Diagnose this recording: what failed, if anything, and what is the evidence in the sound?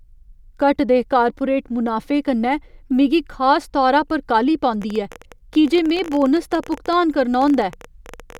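From 4.82 s right through to 8.38 s there's a train of clicks riding over the speech, about 15.2 per second on an irregular spacing, around fifty in all. They're roughly as loud as the speech itself and keep going in the pauses, so they're not coming from the talker. Same-shaped pulses at an uneven pace like that most likely point to interference getting into the analogue wiring or a faulty connection or power supply.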